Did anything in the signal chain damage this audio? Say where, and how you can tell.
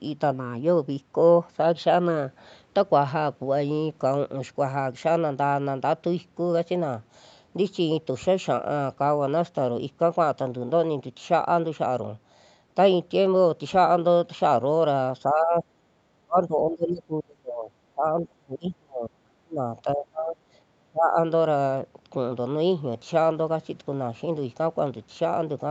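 Yes, at the call-processing stage: the speech gets suppressed in double talk. There's a brief dip around 15.26 to 15.64 s, then much deeper gaps at 16.21 to 19.63, 19.84 to 20.36 and 20.76 to 21.17 s. That's likely the echo canceller mistaking the local talker for echo and ducking them.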